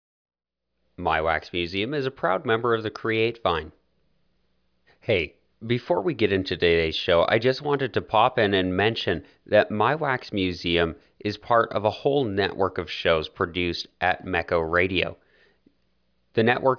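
No technical faults are audible.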